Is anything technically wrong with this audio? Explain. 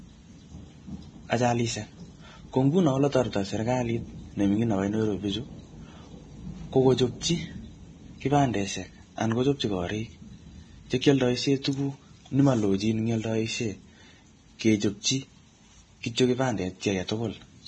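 Yes. Throughout, the speech sounds hissy and grainy, with nothing above 9.7 kHz. This is likely heavy Vorbis compression at a low bitrate, around 23 kbps, quantising treble into noise.

Pre-echo: brief hisses of 21 to 29 ms smear onsets at 11.01–11.04, 11.62–11.65, 14.59–14.61 and 16.15–16.18 s. Block-wide quantisation noise spills ahead of each sharp attack.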